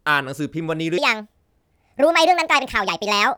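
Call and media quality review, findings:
Section at the wrong speed, 0.98 s to end. Speech suddenly runs 1.52x fast, pitch up about seven semitones, chipmunky and rushed. Likely a playback or resampling stage on the wrong clock, speeding up playback and raising pitch together.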